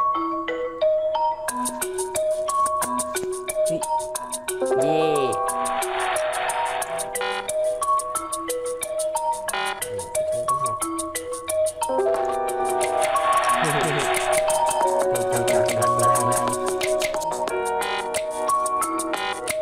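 From 12.6 s to 17.24 s every sound is heard twice, a second copy trailing about a fifth of a second behind at roughly equal loudness, starting and stopping abruptly. This doubled audio track is likely a second capture through a slower path mixed back in.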